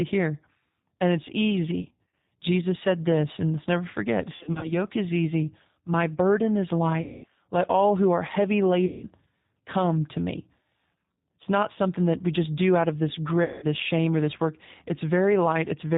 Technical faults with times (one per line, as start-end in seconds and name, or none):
0.00-15.98 G.729 codec
1.81-2.14 VoIP packet loss concealed by the speech codec
4.35-4.74 VoIP packet loss concealed by the speech codec
7.02-7.27 VoIP packet loss concealed by the speech codec
8.86-9.05 VoIP packet loss concealed by the speech codec
13.44-13.66 VoIP packet loss concealed by the speech codec